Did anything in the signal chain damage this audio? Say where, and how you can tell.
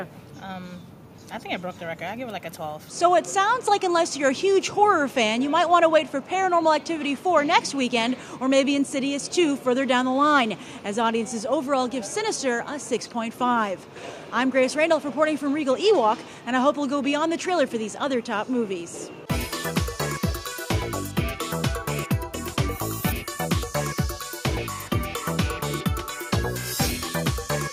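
No, nothing I can hear points to damage at any stage of the signal chain.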